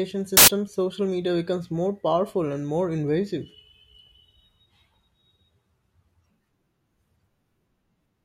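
From 0.37 to 0.48 s, a burst of loud, harsh broadband noise replaces the speech for about a tenth of a second. This is samples built from the wrong bytes: the reader assembled each sample from misaligned or swapped bytes, so the rapidly fluctuating low-order bits landed in the most significant position and turned ordinary waveform detail into loud noise.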